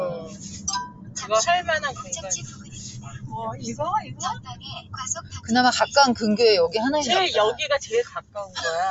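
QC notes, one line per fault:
Throughout: noise suppressor applied to music or sounds. A speech-tuned suppressor treats held and ambient sound as noise, so gain swings around 20 dB and the sound pumps.
0.21–0.67 s, 0.87–1.16 s, 1.97–2.12 s, 2.39–3.33 s, 4.01–4.94 s, 5.20–5.49 s, 8.21–8.56 s: sound cut by the noise suppressor. Sustained parts and tails dip by about 7 to 11 dB, thinning them while attacks survive.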